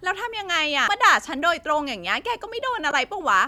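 A low, regular ticking runs under this speech clip from start to finish, a buzz at about 21.5 Hz whose strength rises and falls with the level of the speech. This is a filter restarted on every block. The filter discards its internal state at each block boundary and starts again from silence, so every block opens with a small transient. At this repeat rate the pattern fits blocks of 2048 samples, and the ticks grow louder with the speech because each restart disturbs whatever signal is passing through. Two brief glitches also break through, a tiny one at 0.88 s and a longer one from 2.90 to 2.93 s. These come from damaged data in a compressed stream. Corrupted bytes at those points make the decoder misread the frames, lose sync and hunt for the next valid frame header, which produces the glitches.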